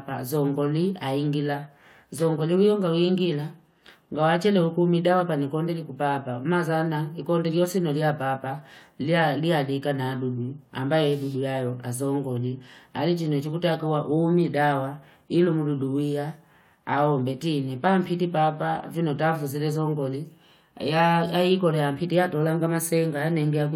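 Nothing stood out on listening to this speech recording.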